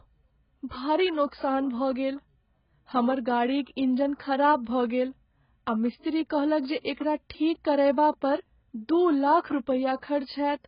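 From the start, the speech is dull and smeared, with nothing above 5.2 kHz. This is likely heavy AAC compression, fitting a very low bitrate near 12 kbps.

Pre-echo appears at 6.81 to 6.85 s, 6.93 to 6.97 s and 9.40 to 9.44 s. Each sharp attack is preceded by roughly 40 ms of hiss, where block-wide codec noise leaks ahead of it.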